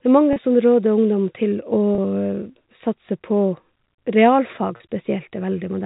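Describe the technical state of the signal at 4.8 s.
At 4.77 to 4.80 s a gap of 30 ms opens in the stream, which fits a single lost packet, and the receiver conceals it with packet loss with pitch repetition, looping the last pitch period of the speech to fill the hole. Because the loss is so short, the patch lands as a brief held, slightly buzzy tone before the speech resumes. Around it, the G.711 telephone coding keeps everything below 4 kHz.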